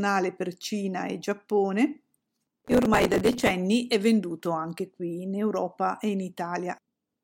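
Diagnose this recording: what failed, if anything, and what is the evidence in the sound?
From 2.58 to 3.51 s a gritty, tearing crackle rides on the speech, then stops abruptly as the load clears. This is processor overload crackle at the driver and buffer stage. The CPU repeatedly failed to finish small audio buffers in time, and every miss replayed a stale fragment of earlier audio with hard edges. The dense texture suggests buffers of around 5 ms and something like seventy misses.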